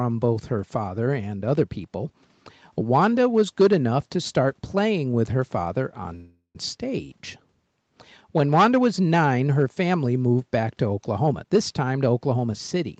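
At 6.15 s the speech stops advancing and a call audio freeze fills the gap until 6.57 s. For roughly 0.39 s the receiver stretches the last sound into a decaying buzz or hiss that falls away to about 120 ms of silence before speech resumes. The likely cause is packets held up in transit, draining the jitter buffer. Nothing is lost: the audio picks up where it stopped, now running about 394 ms later than before.

From 11.26 s to 12.98 s a jitter buffer speed-up follows, as the receiver works off excess buffered audio. It repeatedly cuts out short pitch-period-length slices, removing around 0.3 s in total, so the speech plays at about 117% of normal rate with unchanged pitch and sounds noticeably hurried. Throughout, the band stops at 8 kHz, consistent with Opus at 32 kbps on the call path.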